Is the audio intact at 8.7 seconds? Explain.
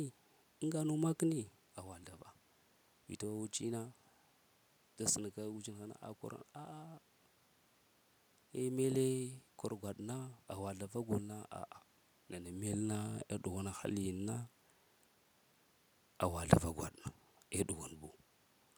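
Yes, the audio is intact at 8.7 seconds, with no technical fault at that moment.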